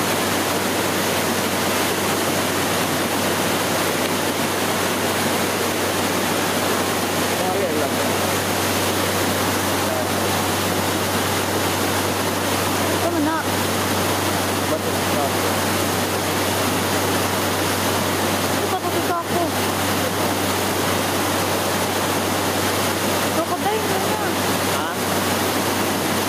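No technical faults are audible anywhere in the recording.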